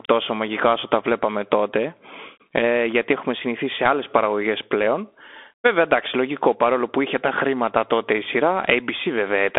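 A speech recording carrying Bluetooth CVSD headset codec damage from start to finish, plainly audible throughout. The band is confined to roughly 250 Hz to 3.5 kHz, so it has the thin, boxy quality of a headset call. CVSD encodes each sample as a single up-or-down bit with an adaptive step size, consistent with a 64 kbps link. Rapid high-frequency movement outpaces that step, leaving the sound gritty and granular.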